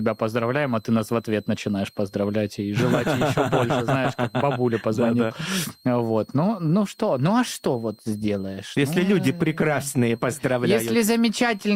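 From start to finish, a switching supply whistle sits faintly under the audio, roughly 35 dB down: a thin, drifting line between 4.0 and 4.4 kHz on a spectrogram.

From 6.25 to 9.69 s, a call bitrate drop makes the sound rough and muffled, consistent with a fall from 64 to 22 kbps. The spectrogram's upper band empties and turns blotchy.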